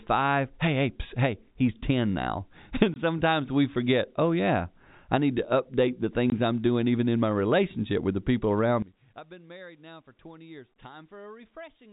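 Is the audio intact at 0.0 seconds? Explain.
Yes, the speech is intact at 0.0 seconds, with nothing there beyond the ordinary narrow band of G.711 telephone coding.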